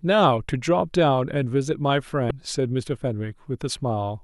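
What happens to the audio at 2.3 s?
Damaged data in the compressed stream hits the speech from 2.28 to 2.31 s: corrupted bytes make the decoder misread those frames and lose sync until it finds a valid frame header, leaving a brief chirp, click or short hole in place of the intended sound.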